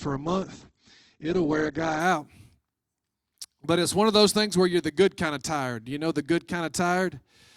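The adaptive stream starting at a low bitrate runs from 0.0 to 2.0 s. The player opened on a thin, low-bitrate version, which fits Opus at around 12 kbit/s, with nothing above 8.2 kHz, then jumps cleanly, without a gap, to a fuller stream near 64 kbit/s.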